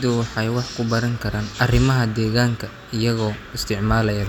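No technical faults can be heard anywhere in the recording.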